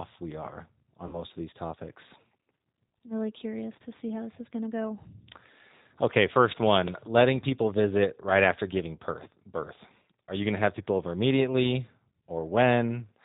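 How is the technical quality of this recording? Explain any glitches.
The technical quality is limited: low-bitrate speech coding runs through the whole recording, with two short dropouts.

Throughout, the speech has passed through the G.729 codec, with the plainly audible roughness of an 8 kbit/s G.729A encoder. The encoder models each 10 ms frame as a vocal tract filter plus a pitch predictor and a few pulses, and removes everything above 4 kHz. The speech is dull, slightly rough and synthetic.

From 1.07 to 1.22 s, and at 9.24 to 9.28 s, there is VoIP packet loss concealed by the speech codec. Audio went missing, about 60 ms in the first gap, consistent with three 20 ms packets, and about 20 ms in the second, consistent with one. The decoder extended its last pitch and filter at falling gain, so each gap becomes a fading buzzy or noise-like smear. The voice stays weakened briefly afterwards.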